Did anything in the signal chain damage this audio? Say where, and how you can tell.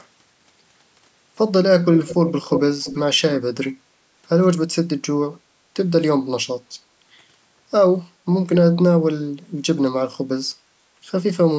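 Yes. From 1.92 to 2.61 s, and again briefly from 2.84 to 3.0 s, a faint, delayed copy of the speech trails the original by about 335 ms. It sits well below the direct sound at first and fainter still the second time. This is an echo leak at the call-processing stage, likely from a far end on a loudspeaker whose echo canceller let part of its microphone pickup through and sent it back. The top end stopping at 8 kHz is just the call's microphone processing band.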